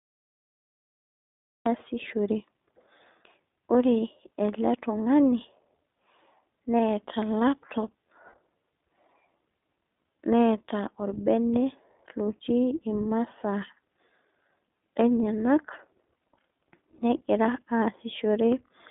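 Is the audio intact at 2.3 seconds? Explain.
No. At 2.3 seconds the iLBC codec damage is present, as it is across the whole clip. The speech is squeezed into a narrow telephone band of roughly 250 Hz to 3.6 kHz, so it loses its depth and crisp upper detail. Each short frame, consistent with 20 ms blocks in the 15.2 kbps mode, has its excitation coded on its own, leaving a plainly audible rough, buzzy, synthetic texture on the voice.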